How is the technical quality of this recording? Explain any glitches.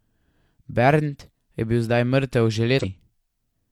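One glitch is audible in the speech, from 2.79 to 2.85 s: damaged data in a compressed stream. Corrupted bytes make the decoder misread those frames and lose sync until it finds the next frame header. The result is a brief disruption lasting about 56 ms.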